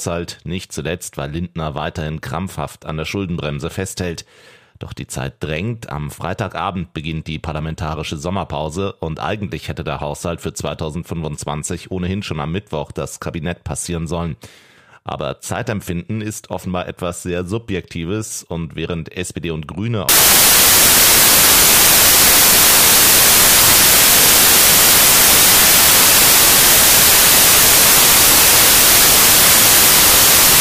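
From 20.09 s to the end, the audio turns into loud, harsh broadband noise: samples built from the wrong bytes. The reader assembles each sample from misaligned or misordered bytes, so the rapidly fluctuating low-order bits land in the high-order position and dominate every value. Unlike added background noise or a dropout, it corrupts the sample values themselves.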